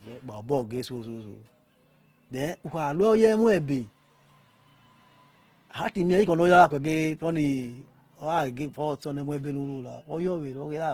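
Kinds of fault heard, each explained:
Opus compression: Throughout the speech, the sound is plainly grainy and rough, with a noisy texture where the voice should be smooth, yet with little of the swirling or hollow gaps of MP3. The top end stays open, reaching up to about 20.2 kHz. This is likely Opus in its full-band music (CELT) mode running short of bits, which fits a rate around 16 kbps: band energies are preserved, but fine detail is filled with folded or noise-like content.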